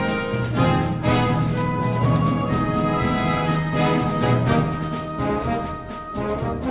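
Nothing stood out on listening; the audio comes through an ordinary telephone-band call path, with nothing heard above about 4 kHz.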